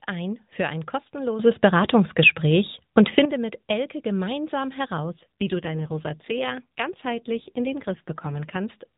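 At 1.39 s, right after "ein für ein", the speech and its background noise jump together by about 10 dB in a single step. This is a sudden gain jump, likely a digital gain setting applied without a ramp, and it holds until 3.25 s. From 5.04 s to 8.57 s an AMR rate drop takes the narrowband AMR codec from 12.2 kbps down to 5.9 kbps. With fewer bits per frame to model the voice, it turns buzzier and more synthetic. The 4 kHz band limit stays the same and there is no gap in the audio.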